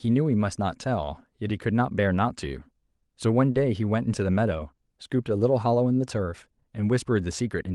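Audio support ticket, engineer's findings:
Clock drift between sender and receiver: runs the whole clip. Sender clock roughly 3% slow, so the jitter buffer keeps draining and the receiver keeps padding to stay level. Unlike random network jitter, every adjustment goes one way: stretching, never cutting. Suspect sender device clock, not the network.

Repeated timing corrections, 0.06 to 3.28 s: speech slowed to 98%, roughly 70 ms added. Jitter buffer time-stretching to absorb the slow sender. Second run 5.92 to 7.43 s, slowed to 97%, roughly 50 ms added. These are spread, uneven, same-direction edits, unlike a single stall's one held sound.

Short stall from a late packet, 3.52 to 3.57 s: buffer ran empty, last sound held 30 ms, then resumes at the same point. Nothing lost. Delay rises 30 ms afterwards. Repeat at 4.75 to 4.80 s, same 30 ms fill, same 30 ms delay step. Unlike packet loss, no sound is skipped. 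Only a brief hold. Likely the drift emptying the buffer between corrections. Opus call path audible as band limit near 12 kHz, fits 32 kbps.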